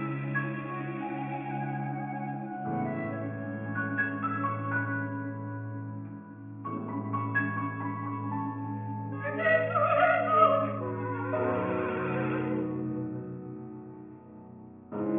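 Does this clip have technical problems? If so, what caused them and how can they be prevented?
Yes. Aliasing runs through the whole clip: content above 3 kHz has folded back below it into unrelated, gritty tones, about 20 dB under the main sound, which points to a drop to a 6 kHz rate without an anti-aliasing filter. A simple low-pass would only sound dull; this adds false, metallic tones. To prevent it, low-pass the audio below half the new rate before lowering the sample rate.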